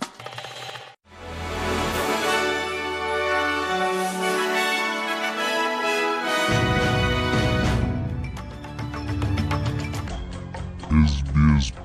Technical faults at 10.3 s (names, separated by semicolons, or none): section at the wrong speed